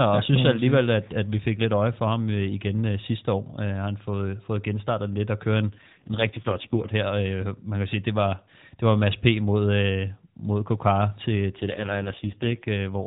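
Speech over an AMR narrowband mobile codec, with an AMR rate drop at 5.68–6.94 s (after "genstartet lidt og kørt") and 11.58–12.69 s: sound turns buzzier, fitting 12.2 to 4.75 kbps, with no gap or band change, unlike packet loss.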